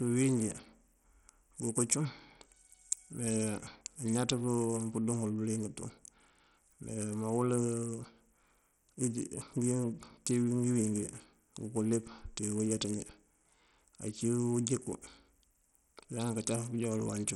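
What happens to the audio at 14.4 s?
Bluetooth SBC compression, likely, affects 14.4 s as it does the whole clip. With a small bit pool, around 64 kbps, the upper sub-bands starve and the rest are coarsely quantised, so the speech carries gritty noise and flickering treble, with nothing above 16.6 kHz.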